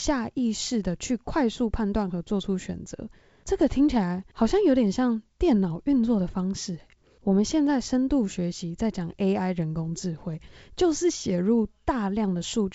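The speech carries no technical fault: it bears the character of G.722 wideband telephone coding, consistent with its full 64 kbit/s mode, with content reaching up to about 7.7 kHz and nothing above, and at most faint coding roughness.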